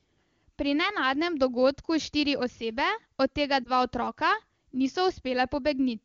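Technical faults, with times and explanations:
3.64–3.70 s, lost AMR speech frames: a quick dip or warble, about 20 ms of missing audio, sounding like one dropped frame. The wideband decoder patched the gap by repeating its last good settings at falling gain, then recovered, briefly weak or rough, at 23.85 kbit/s.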